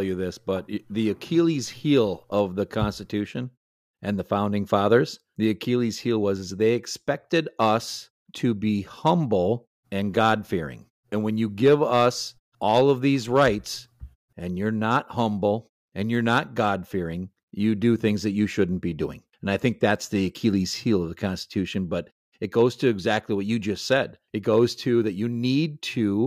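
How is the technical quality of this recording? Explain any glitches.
The technical quality of this recording is sound, with no glitches to explain.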